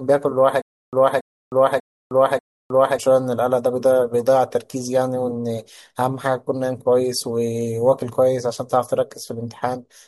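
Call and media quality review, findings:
Stutter with silent gaps, 0.62–2.98 s, speech: a 280 ms fragment replays four times, each followed by 310 ms of digital silence, a 590 ms cycle. Likely cause: player or stream stall, with the buffer re-served on each retry. Intervening audio lost.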